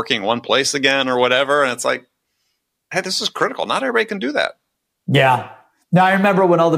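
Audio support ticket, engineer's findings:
No faults found on this speech.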